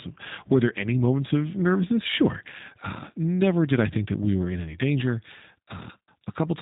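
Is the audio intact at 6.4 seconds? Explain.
No. At 6.4 seconds the speech sounds slightly rough and synthetic, with nothing above 3.8 kHz. This is G.729 codec damage, present throughout and plainly audible. The codec rebuilds each 10 ms frame from a vocal tract filter, a pitch predictor and a few pulses, which fits an 8 kbit/s G.729A stream.

A faint hiss also rides on the louder and brighter sounds from 1.14 seconds to the end. This is sample clock jitter. The converter's clock wanders by roughly half a microsecond, so samples land slightly early or late. Steep parts of the waveform suffer most, leaving an error around 55 dB below the signal.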